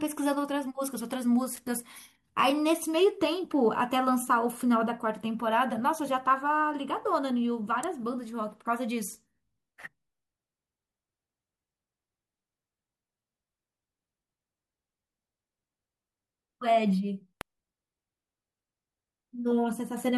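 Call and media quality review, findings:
Electrical switching spike, three instances: sharp snaps at 1.57 s, 7.83 s and 17.41 s, peaks about -15, -20 and -15 dBFS. Likely a nearby switch, motor or static discharge arcing into the audio line. Waveform: isolated needle transients over the speech. Spectrogram: thin full-band vertical lines.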